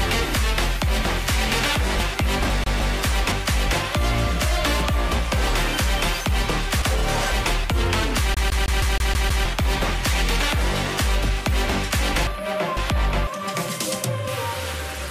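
From 2.0 to 3.3 s, chunks out of order: a 0.5 s block plays one slot late, leaving hard joins that show as vertical seams and waveform steps. Inside it, from 2.64 to 2.96 s, the CD is stuck on one turn, repeating a 159 ms slice twice with brief mutes; identical tiled patterns and small gaps appear. From 5.3 to 7.3 s a chunk arrives three slots late. From 8.34 to 9.45 s the same loop repeats seven times as an even stutter. From 12.3 to 13.3 s another chunk plays one slot late.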